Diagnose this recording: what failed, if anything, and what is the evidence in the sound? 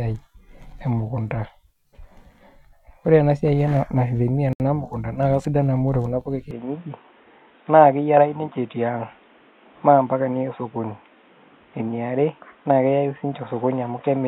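At 4.53 s the speech drops out for about 70 ms, to 4.60 s, with abrupt edges that are slightly smeared, and then it resumes where it stopped. This is a gap at a join of encoded pieces, a codec-stage fault. The audio was encoded in separate runs and joined untrimmed, so the encoder's start-up delay and the padding of the last frame remain as silence in the middle of continuous sound.

From 6.51 s, right after "ore kuna puka", the speech turns dull and boxy to the end, with nothing above 3.8 kHz and a new background noise roughly 35 dB below the speech. The level stays about the same, and there is no silence at the change. This points to the input switched to a poorer device at the driver stage, likely a headset call profile or a different microphone with its own narrow band and noise floor.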